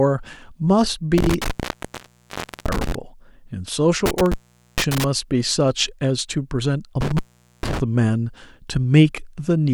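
Intermittent contact breaks the speech three times: 1.18 to 2.95 s, 4.06 to 5.04 s, and 7.01 to 7.80 s. A loose cable or plug opens for 1.16 s, then 0.44 s twice. The sound drops to faint hiss, with crackle at each edge.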